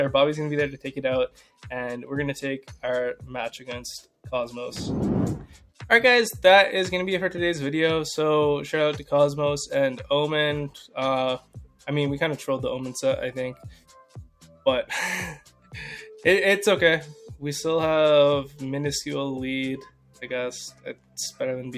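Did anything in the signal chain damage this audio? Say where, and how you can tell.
Yes. A speech-oriented noise suppressor in the call-processing stage was applied to music or sounds throughout. It treats steady, sustained content as noise and keeps riding the gain, so the level swings by roughly 5 dB as held material sinks and attacks push it back up. On a waveform, the envelope pumps between transients. On a spectrogram, sustained partials and tails look patchy and thinned rather than smoothly continuous.

Sound was cut by the noise suppressor at 1.29–1.67 s, 5.5–5.8 s, 11.4–11.85 s, 13.57–14.66 s, 15.41–15.74 s, 19.9–20.23 s and 20.71–21.17 s, with drops of about 11 to 12 dB. At each point the suppressor classed a steady or decaying stretch as noise and pulled it down harder than its surroundings. A spectrogram shows a sudden darkened band across the sustained energy, and the waveform shows a clear dip cutting the decay short.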